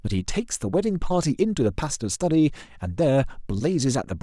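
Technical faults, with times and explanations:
Nothing technical stands out here; the speech comes through without any audible trouble.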